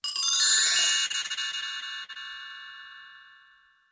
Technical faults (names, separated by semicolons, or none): repeated packet loss (robotic sound)